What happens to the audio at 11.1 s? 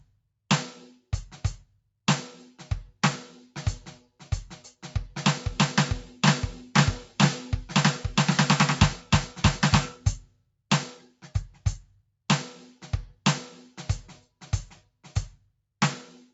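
The music sinks by about 11 dB from 11.0 to 11.29 s: sound cut by the noise suppressor, which mistook the music for noise and turned it down.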